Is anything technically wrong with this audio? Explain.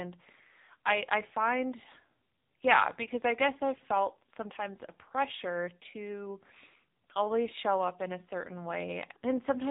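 Yes. Throughout the speech, the sound is thin, boxy and buzzy, with a synthetic, robotic edge. Nothing reaches above about 3.9 kHz. This is the AMR narrowband mobile codec at work. It samples at 8 kHz and rebuilds the voice from a vocal-tract model fed by a handful of pulses per short subframe. The heavy damage points to a low-rate mode of around 6.7 kbps, where so few pulses leave the buzz.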